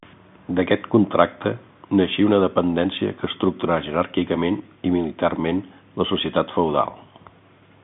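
No technical faults can be heard anywhere in the speech. It carries the narrow sound of G.711 A-law telephone coding, with the band running from about 150 Hz to 3.6 kHz, nothing above about 3.8 kHz, and at most a faint noise riding along with the speech level, which fits a 64 kbps line.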